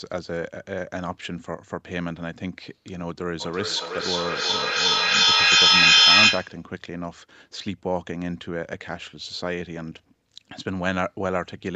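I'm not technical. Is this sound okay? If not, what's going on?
No. From about 3.4 to 6.7 seconds there is a feedback echo between two devices. Two devices in the same room are on the call, and each one's microphone picks up the other's speaker, so the speech keeps coming back roughly every 0.4 seconds. Here the repeats build up until they are louder than the speech itself. Room echo fades smoothly, but this one comes back in distinct, evenly spaced copies that grow instead of dying away.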